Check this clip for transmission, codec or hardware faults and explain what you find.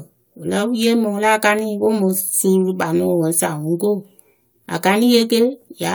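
One fault stands out: CD scratch ticks between 1.09 and 1.59 s. Four brief ticks, none longer than a millisecond or two, fall at a steady spacing across that half second. A scratch on the disc wipes out more data than error correction can rebuild, once per revolution, so the player patches or mutes those samples on each turn. The even spacing at the rotation rate separates these from vinyl crackle or random digital clicks, which fall irregularly.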